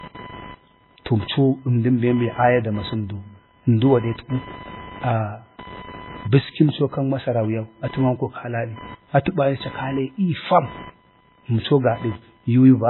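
From start to finish, a thin buzzing whine sits under the speech, pulsing at around 1 kHz and roughly 25 dB below it. This is computer activity noise: processor, graphics or mouse load shifts the shared ground of the audio circuit, so the buzz follows the machine's workload rather than the voice.

Across the whole clip the speech is also dull and smeared, with nothing at all above 4 kHz. The cause is likely low-bitrate audio saved at a high bitrate. The sound fits an MP3 encoded at around 16 kbit/s and later re-saved at a generous rate such as 320 kbit/s. The second pass cannot bring back the missing top end or undo the first encoding's artefacts.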